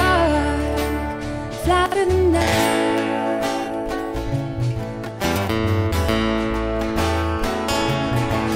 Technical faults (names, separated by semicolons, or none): chunks out of order